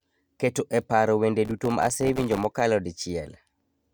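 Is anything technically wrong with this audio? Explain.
Yes. From 1.45 to 2.61 s the speech carries processor overload crackle. The processor repeatedly failed to finish its audio buffers in time, and each missed deadline dropped a sliver of silence with hard edges into the signal. The spacing fits very short buffers of around a millisecond and a half, with dozens missed across the stretch. The result is a gritty, tearing crackle over the speech that stops once the load eases. On a waveform, the stretch shows many tiny near-silent dropouts. A spectrogram shows dense vertical broadband streaks.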